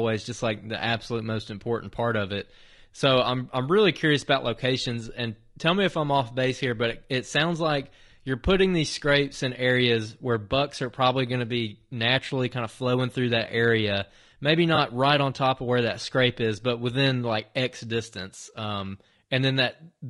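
Throughout the clip, the speech has likely passed through low-delay AAC compression, probably AAC-ELD at a rate that fits about 32 kbps. At this low bitrate the voice sounds plainly rough and grainy, with noise filling the gaps between harmonics and a synthetic-sounding top band.

From 14.75 to 14.78 s, AAC frame loss with concealment occurs. The decoder lost what sounds like a single frame and rebuilt the gap from the preceding spectrum. The result is a brief smeared, noisy or phasey blur in the speech.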